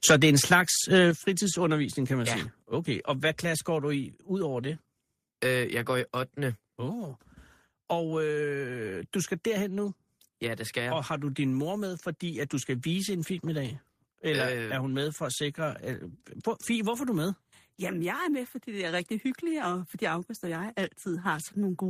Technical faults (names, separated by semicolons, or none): microphone overload; microphone volume stepped down